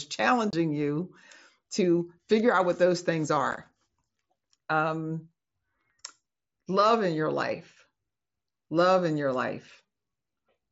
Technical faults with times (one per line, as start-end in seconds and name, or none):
0.51-0.53 unconcealed Bluetooth headset packet loss
3.51-3.57 unconcealed Bluetooth headset packet loss